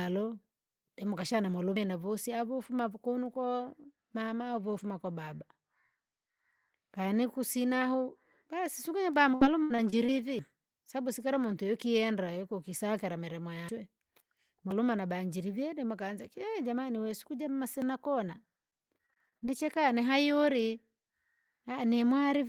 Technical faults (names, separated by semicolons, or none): dropped buffer (overrun); repeated packet loss (robotic sound)